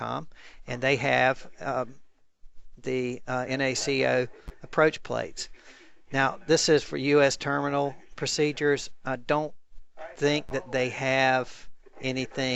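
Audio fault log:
No fault is found in this audio.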